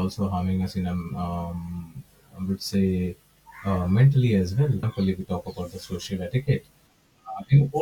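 At about 4.79 s there's a quick glitch lasting roughly 50 ms, right before "if we talk about". That's damaged data in a compressed stream: the decoder hits corrupted bytes, loses frame sync, and skips ahead to the next clean header.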